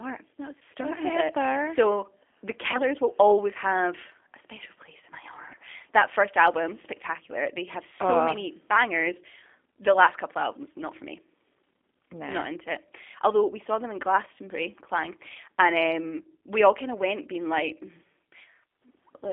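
Throughout, the speech is carried by the G.729 codec at 8 kbit/s. Its pulse-based excitation and filter model make the voice rough and synthetic. On a spectrogram everything above 3.5 kHz and below about 250 Hz is empty, and the harmonics look smeared.

At 0.59 to 0.62 s, and again at 2.72 to 2.81 s just before "will always have a", VoIP packet loss concealed by the speech codec produces a brief fading smear, each consistent with one lost 20 ms packet. The decoder repeats its last pitch and filter at falling gain. On the waveform the envelope sags smoothly, and the spectrogram shows flat, repeated harmonics.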